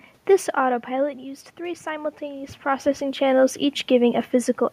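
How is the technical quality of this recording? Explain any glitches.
There is one glitch, an automatic gain rising event. From 0.96 s to 3.13 s the speech and the room noise behind it swell together, gradually over about two seconds. The level at the microphone had dropped by about 11 dB, and the talker moved around half a second in. The automatic gain control read the input as too quiet and slowly raised its gain by about 4 dB, lifting the background along with the voice. The talker moves again around two and a half seconds, which is a change at the microphone and not the system.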